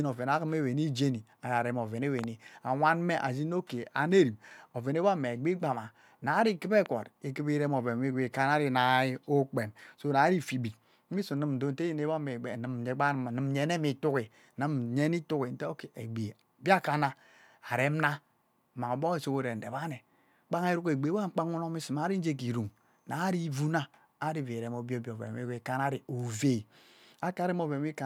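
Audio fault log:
2.19–2.26 s, loud pop: a quick double pop, peaking roughly 10 dB above the speech, which keeps going underneath. That's a sudden electrical step or pulse landing on the signal, likely from a plug, switch or static discharge, with the downstream circuitry shaping it into sharp hits.
6.86–6.88 s, loud pop: a single sharp pop, again roughly 10 dB over the speech, likely with the same kind of voltage pulse riding on top of the sound.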